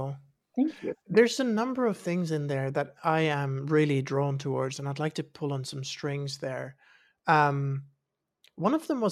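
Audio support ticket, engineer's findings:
No audible faults found in the speech recording; nothing to attribute to any component in the signal path.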